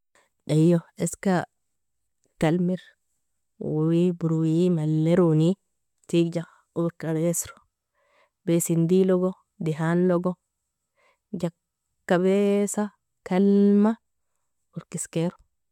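No technical faults can be heard anywhere in this speech recording.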